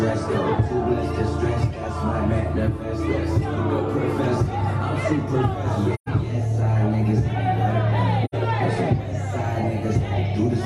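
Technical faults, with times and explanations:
5.94 to 6.09 s and 8.24 to 8.35 s, AAC frame loss with muting: the sound drops to silence for about 128 ms, then about 85 ms, which fits three and then two lost frames. The decoder zeroes the spectrum of each missing frame, and because AAC frames overlap, the sound fades out into each gap and back in after it instead of cutting off sharply, leaving a soft-edged hole.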